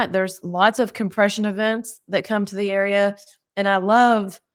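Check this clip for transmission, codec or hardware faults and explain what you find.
Three related transmission faults are present in this speech, all from a timing mismatch between sender and receiver rather than from the codec or hardware.

Clock drift between sender and receiver runs through the whole clip. The sending side's clock is running about 3 percent slower than the receiver's, so audio arrives a little too slowly and the jitter buffer keeps draining. The receiver has to pad the stream to keep it going, which sets off the two faults below. It is heard as a faintly unsteady, slightly dragging tempo. On a waveform it leaves no single mark; it shows up only as the spread of small repairs across the clip.

Repeated timing corrections run from 0.16 s to 4.42 s. To make up for the slow sender, the receiver keeps repeating short slices of audio, all in the same direction and at uneven spacing. 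Together they add roughly a tenth of a second, so playback runs at about 98 percent speed. Each repeat is tiny and is heard, if at all, as a slight hiccup. A spectrogram would show brief duplicated frames where harmonic patterns repeat with a small seam at each join.

A short stall from a late packet occurs at 3.23–3.28 s. The jitter buffer ran empty, so the receiver held the last sound for 30 ms until the packet arrived, then carried on from the same point. Nothing is lost, but the sound hangs a moment too long with a faint buzzy or dipped quality, and playback ends up 30 ms later. On a spectrogram this appears as a flat, smeared band where the spectrum freezes, and on the waveform as a short stretch of repeated, even cycles.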